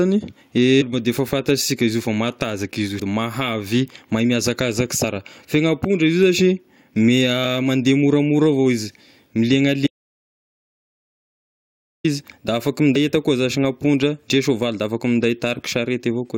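At 0.80 to 0.83 s, then at 2.98 s and 5.03 s, the speech is broken by short bursts of damaged data in the compressed stream. Corrupted frames make the decoder misread the bitstream, lose sync and hunt for the next valid header, so each spot comes out as a brief chirp, squawk, click or short hole. On a spectrogram each appears as a thin vertical smear of broadband energy that fits none of the surrounding harmonic structure. In the waveform it shows as a jagged spike or an abrupt discontinuity.

From 9.87 to 12.04 s comes an audio dropout to silence lasting about 2.17 s. The sound cuts off mid-flow and resumes just as suddenly, and whatever was said in between is lost. The gap is silent with no room tone, most likely because the input signal was lost while recording carried on writing silence. The waveform drops to a near-flat line, and the spectrogram turns to a solid black block with hard edges on both sides.

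At 12.95 s, one more burst of damaged stream data gives another short glitch with the same vertical smear.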